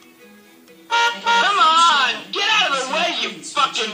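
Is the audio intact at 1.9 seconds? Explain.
No. Compressed frames are skipped from 1.88 to 1.90 s, so the audio jumps ahead by about 50 ms, consistent with two lost 23.2 ms frames.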